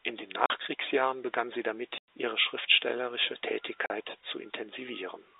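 Packet loss filled with silence occurs at 0.46 s for 40 ms, at 1.98 s for 100 ms (between "begann sie" and "ihre schriftstellerische"), and at 3.86 s for 40 ms (just after "ihre schriftstellerische"). Audio packets failed to arrive and the receiver played dead silence in their place, so the speech drops out abruptly, with hard edges. The gap lengths fit 20 ms packets. The narrow telephone band of the G.711 line can be heard throughout.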